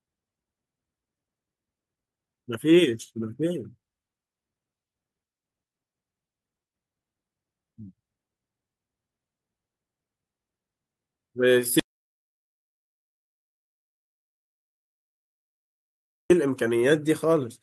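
At 11.80 s the speech cuts off into dead silence until 16.30 s, losing 4.5 s: an audio dropout to silence, likely from a lost input.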